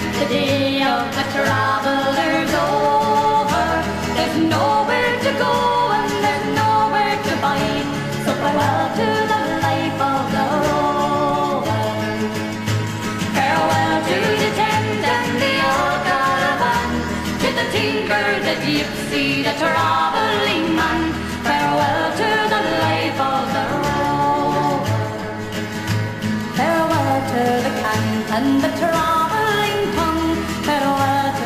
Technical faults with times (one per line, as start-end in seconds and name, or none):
26.70-31.46 sample clock jitter